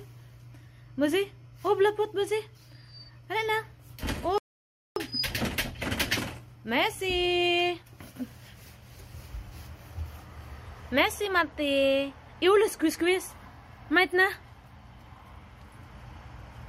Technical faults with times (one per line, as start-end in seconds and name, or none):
4.38-4.96 playback stall
4.96-7.96 time-compressed catch-up